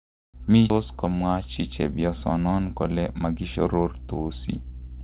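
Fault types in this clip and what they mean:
Skip ahead: At 0.7 s the sound jumps straight forward with no gap and nothing filling it. Something like 0.7 s is simply gone, dropped in transit or flushed from an overfull jitter buffer, and the two sides are butted together.
Jitter buffer speed-up: From 2.01 to 2.66 s the speech runs at about 113% speed but keeps its pitch, so it sounds a bit rushed. The buffer was holding too much, so the receiver trimmed tiny pitch-period slices, roughly a tenth of a second in all.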